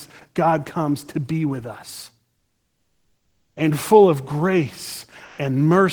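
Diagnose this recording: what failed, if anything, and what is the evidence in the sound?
Codec stage, during the pause after "to be with us": from 2.36 s to 3.56 s the room background gives way to comfort noise in place of the background, a steady, featureless hiss about 2 dB quieter than the real ambience, which sits about 56 dB below the loudest speech. The 1.2 s substitution likely comes from Opus discontinuous transmission: the sender stopped coding frames once its detector judged the signal to be background, and the receiver synthesised noise to cover the gap.

The same mechanism shows up as sound dropped by the voice detector at 5.24 s to 5.38 s. For 140 ms the signal switches to that flat noise, and about 50 ms of actual speech disappears with it before the sound resumes. The detector likely misclassified a quiet stretch of speech as background and halted transmission. The decoder then filled the slot with comfort noise until the detector triggered again and real frames returned.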